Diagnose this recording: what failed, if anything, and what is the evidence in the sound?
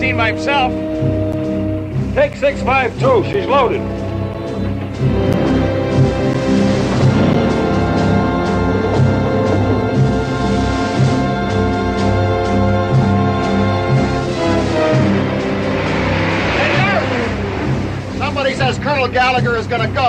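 Periodic USB or driver dropouts at the driver or buffer stage. About seven brief gaps of silence, each around 10 ms, recur every second from 1.32 to 7.34 s.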